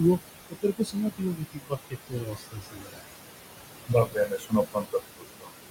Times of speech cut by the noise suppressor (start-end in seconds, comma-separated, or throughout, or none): 0.50-3.03, 3.87-5.51